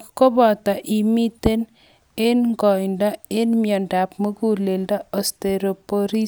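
A short speech recording with no technical faults to be heard anywhere in the signal.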